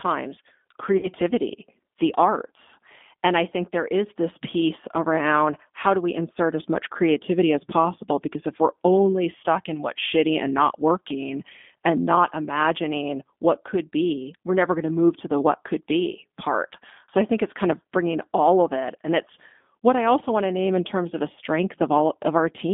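From the start, the speech has that G.729 codec sound, most likely the A variant at 8 kbit/s. The line band runs only from about 200 Hz to 3.5 kHz, so it's thin and boxy with nothing bright on top. The codec rebuilds each frame from a filter model, a pitch predictor and a handful of pulses, and you can plainly hear it: a slightly rough, synthetic grain over every syllable.

At about 0.97 s there's a VoIP packet loss concealed by the speech codec, running to about 1.08 s. Around 60 ms of audio went missing, which fits three lost 20 ms packets. The decoder carries on from its last pitch and filter settings and turns the gain down frame by frame, so the sound smears into a short buzzy tone or coloured noise that fades. Because each frame leans on the previous one, it stays weak and a bit distorted briefly after the gap before recovering.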